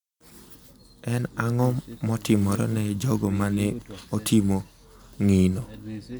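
Listening to this speech recording, nothing technical stood out at any point.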